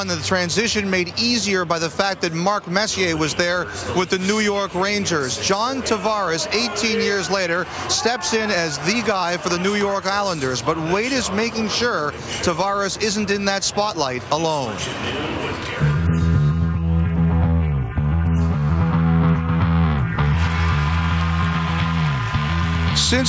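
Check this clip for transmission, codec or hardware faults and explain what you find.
No transmission, codec or hardware faults are detectable in this recording.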